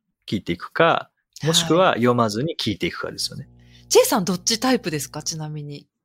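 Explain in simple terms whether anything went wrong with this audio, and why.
A low, steady buzz creeps in under the speech at 3.20 seconds and stays until 5.36 seconds, then stops. It is faint, well below the speech, and doesn't waver. This is mains hum. The recording picked up electricity from the power line, through a ground loop in the cabling or a transformer sitting close to the equipment. That leaked current turns into a constant 60 Hz tone, matching the pulse of the mains supply.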